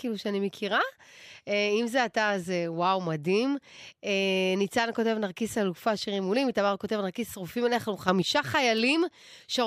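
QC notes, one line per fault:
8.08–8.22 s, sudden gain jump: the speech abruptly steps up by about 7 dB, and the background noise rises with it at the same instant, so the whole signal gets louder as one rather than the talker simply speaking up. The step lasts roughly 0.14 s before the level drops back. The shift in both layers at once is likely the result of a digital gain change applied instantly between adjacent samples, with no ramp to ease it in or out.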